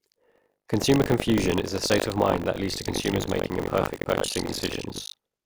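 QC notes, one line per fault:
Throughout, buffer tearing: a steady robotic buzz at 50 Hz rides on the speech and drops away in the gaps, since it exists only where there is signal. The program filling the playback ring buffer and the hardware draining it have slipped, so each period, which fits a buffer of about 20 ms, holds roughly a fifth of stale audio from around 70 ms earlier. The hard joins on both sides of that stale stretch repeat fifty times a second.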